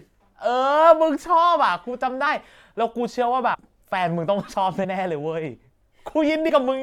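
Compressed frames are skipped four times: at 2.25 s, 3.53 to 3.55 s, 4.83 to 4.85 s and 6.48 to 6.50 s. Whole frames go unplayed. The speech jumps ahead by roughly 50, 100, 50 and 70 ms.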